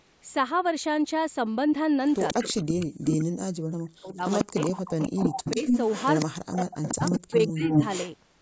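From 2.03 to 2.85 s, a faint copy of the speech trails it by 142 ms. This is echo leak, likely a loudspeaker echo that the far side's canceller failed to remove. It returns louder from 4.26 to 6.25 s and reaches the level of the speech itself from 6.82 to 8.11 s. The fixed delay marks it as echo rather than reverberation.

The speech also drops out deeply from 2.33 to 2.38 s, 2.81 to 4.57 s, 5.03 to 5.58 s and 6.24 to 7.8 s. This is speech suppressed in double talk: the canceller likely ducked the talker along with the echo. These dips overlap the echo, which sets them apart from packet-loss gaps.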